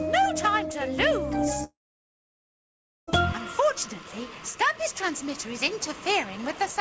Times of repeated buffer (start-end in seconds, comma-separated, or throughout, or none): none